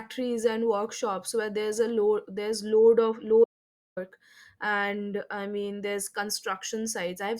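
Speech, with an audio dropout to silence just after "load there's load of". From 3.44 to 3.97 s, about 0.52 s falls to silence with no room tone left, likely from lost input.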